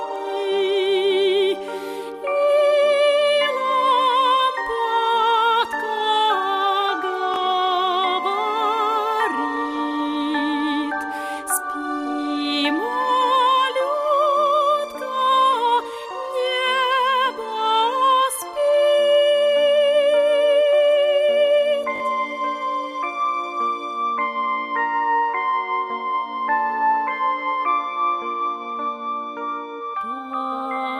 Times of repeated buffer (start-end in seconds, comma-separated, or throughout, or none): 7.34-7.36, 21.96-22.00